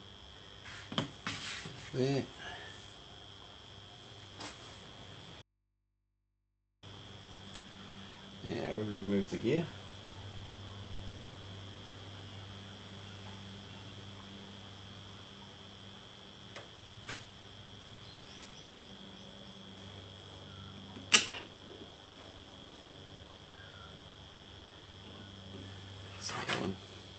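At 5.42 s the sound cuts out abruptly and returns at 6.83 s, a loss of about 1.4 s. It is an audio dropout to a faint residue: the gap is not silent but holds low mains hum roughly 40 dB below the signal. The hard edges and hum set it apart from a natural pause or a fade. The likely cause is a break in the signal ahead of a still-live input stage.

Repeated packet loss with a robotic sound follows from 7.23 to 11.95 s, again from 16.75 to 18.85 s, and from 21.27 to 24.95 s. In each stretch dozens of brief holes, up to 100 ms long in the first and 60 ms in the later two, are patched by extending the preceding sound. Close to a third of each span is covered this way. The result is a choppy stutter with pieces missing that keeps going rather than cutting to hum. The call codec path band-limits the audio at 8 kHz throughout.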